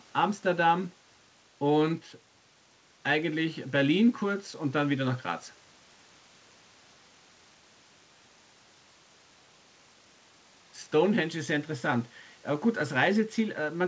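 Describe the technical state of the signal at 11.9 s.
At 11.9 s the speech is intact, carried cleanly through the call codec with its normal band limit, nothing above about 8 kHz.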